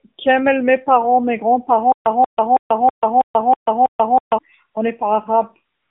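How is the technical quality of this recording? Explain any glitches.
The technical quality is poor. Mobile codec damage runs throughout, with a stutter and a comfort-noise patch.

AMR narrowband mobile codec: The whole clip passes only about 200 Hz to 3.7 kHz. The speech sounds buzzy and synthetic, which fits a low AMR-NB bitrate near 7.4 kbps.

Stutter with silent gaps: From 1.92 to 4.38 s, a 186 ms fragment repeats seven times. Each repeat is followed by 137 ms of dead silence. A stalling stream likely caused it, and the original audio there is lost.

AMR comfort noise: From 5.76 s to the end, 155 ms of smooth synthetic hiss replaces the real background. The phone stopped sending speech frames, and the receiver filled the gap.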